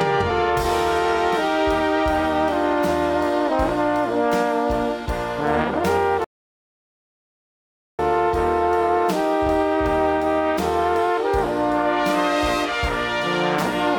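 At 6.24 s a playback stall silences the sound for 1.74 s, likely from a starved or blocked player; waveform and spectrogram show a flat blank gap until 7.99 s.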